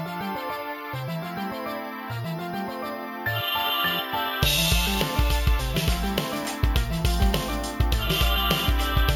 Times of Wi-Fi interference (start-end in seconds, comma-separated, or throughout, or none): none